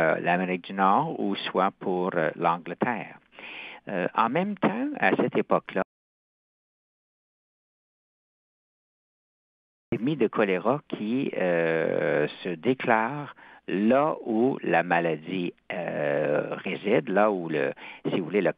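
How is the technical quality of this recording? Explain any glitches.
The recording has one clear glitch, an audio dropout to silence. From 5.82 to 9.92 s, roughly 4.1 seconds, the sound cuts off abruptly and is replaced by silence with no room tone, then resumes mid-flow. The likely cause is the input signal being lost, through a disconnected device, a broken link or an accidental mute, while the recorder kept writing zeros. Whatever occurred during that gap is gone.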